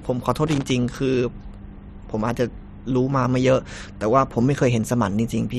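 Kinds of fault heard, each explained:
Loose connector crackle: a worn or dirty contact in the signal path is making and breaking as it shifts, chopping the speech. It is heard as an irregular burst of scratchy crackle from about 0.47 to 0.70 s.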